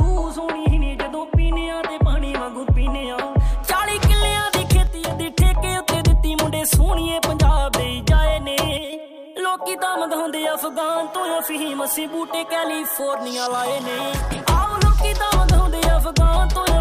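The audio twice sinks abruptly in level, by about 6 dB, first from 4.87 to 5.11 s and again from 8.77 to 8.93 s, then snaps back just as suddenly. Both dips fit one channel dropping out: with one stereo channel briefly lost, the mono sum keeps only half of what both sides shared, and most likely a momentary connection or routing loss caused it.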